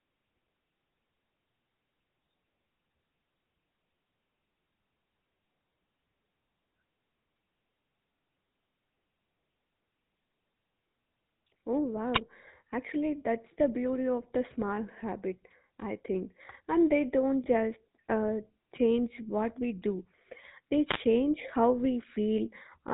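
The whole clip has passed through the GSM full-rate codec. Its roughness fits a 13 kbps phone link. The codec rebuilds the voice from a vocal-tract model fed with sparse, regular pulses. Nothing above 4 kHz survives. The speech sounds plainly buzzy and gravelly.

At 12.12 to 12.21 s there is a wireless microphone noise hit. The radio link faded briefly as reflections cancelled the signal. Receiver noise rose. It comes through as a short swish of static. A second, longer hit follows from 20.86 to 21.03 s.

From 17.44 to 17.47 s there are lost GSM frames. The gap fits a single 20 ms frame. The decoder filled it by repeating the last good frame's settings. The loss was too brief to fade out. It leaves a quick, rough, metallic ring in the speech.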